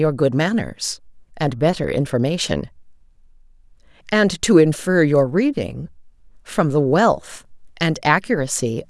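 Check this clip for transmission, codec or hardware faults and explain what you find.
Listening through the speech, I hear nothing that points to a fault anywhere in the chain.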